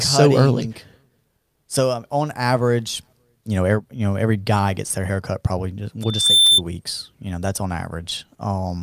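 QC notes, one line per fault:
6.02–6.61 s, loudspeaker feedback squeal: the mic re-amplifies its own loudspeaker until a 3.6 kHz tone runs away, swelling over roughly a third of a second to around 10 dB above the speech. The spectrogram shows one brightening horizontal line, and the waveform's envelope balloons.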